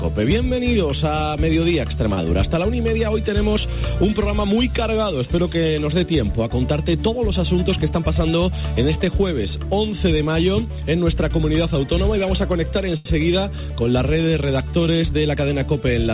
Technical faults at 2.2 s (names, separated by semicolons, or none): short stall from a late packet